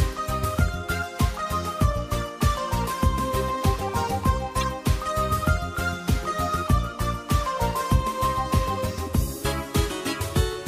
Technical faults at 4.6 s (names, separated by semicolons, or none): corrupt frame decoded